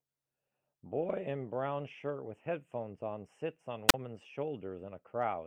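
At 3.88 s comes a wireless microphone squelch dropout. The analogue radio link fades, hiss swells briefly, then the receiver's squelch mutes the output for 35 ms before speech returns by 3.94 s. The rising hiss beforehand sets it apart from a clean digital packet-loss gap.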